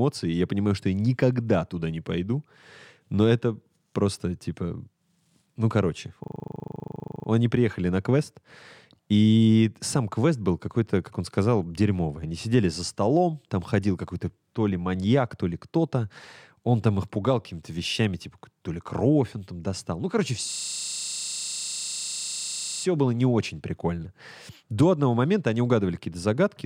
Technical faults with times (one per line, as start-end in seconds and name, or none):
6.24-7.28 system hang loop
20.52-22.84 system hang loop